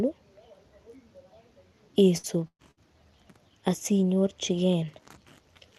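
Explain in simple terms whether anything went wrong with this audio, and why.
Three times, a burst of packet loss dropped chunks of the speech in transit: 2.17–2.26 s, 2.47–2.62 s and 2.71–2.80 s. The receiver stretched the last sound to cover each gap, then jumped ahead, so pieces are missing, and the middle gap fades into brief silence.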